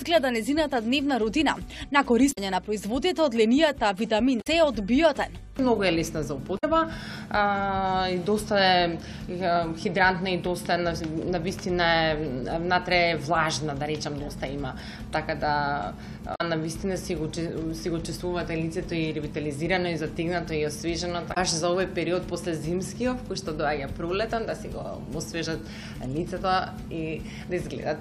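Damaged data in a compressed stream makes the decoder lose sync and resync, leaving short blips near 2.29, 4.38, 6.55, 16.32 and 21.30 s, each about 0.1 s long.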